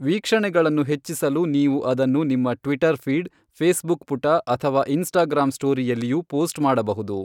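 Nothing technical goes wrong anywhere in this bit of speech, so there's no fault here to describe.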